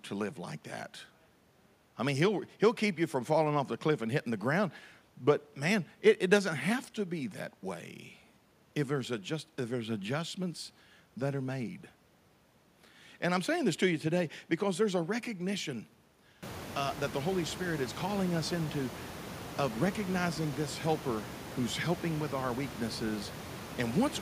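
No technical faults can be heard in this speech recording. The background noise of the room rises by about 23 dB from around 16 s on, but it remains a part of the recorded space and sits about 14 dB below the speech.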